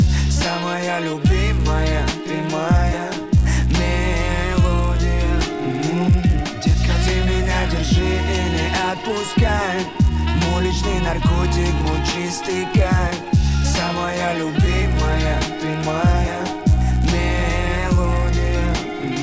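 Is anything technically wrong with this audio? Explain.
Yes. A resampler restarted on every block runs through the whole clip. Each 10 ms block was converted on its own, so the filter lacked real neighbouring samples at every block edge. That leaves a small error at each boundary, 100 times a second. At this rate the ticks merge into a steady 100 Hz buzz that rides on the signal and drops away when it falls quiet. The sound points to a conversion down to around 16 kHz.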